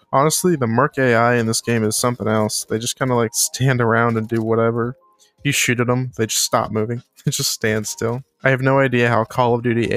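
From 4.94 to 5.43 s the audio is sound cut by the noise suppressor: a sound was mistaken for noise and pulled down by about 18 dB at its deepest, for around 0.4 s in all. The waveform shows a sudden sag in amplitude, and the spectrogram shows a darker band there.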